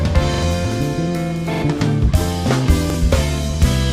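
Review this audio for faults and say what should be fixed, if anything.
Repeated buffer at 0.34–0.43 s and 1.54–1.62 s (a 43 ms piece heard three times) and 2.90–2.94 s (heard twice). Each stutter replaces roughly 100 ms, 100 ms and 40 ms of audio. Late data made the device replay its last block, which fits a 2048-sample buffer. Waveforms show identical copied blocks, and spectrograms show vertical broadband lines at each hard join. A larger buffer or higher-priority audio thread would prevent it.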